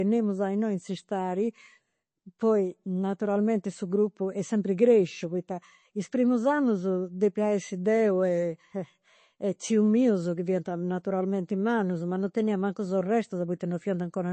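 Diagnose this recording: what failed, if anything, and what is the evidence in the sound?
Throughout the speech the sound is dull and watery, with nothing above about 8.3 kHz. This is likely MP3 compression at the codec stage, around 32 kbps: short of bits, the encoder cuts the treble and drops weak frequency lines frame by frame.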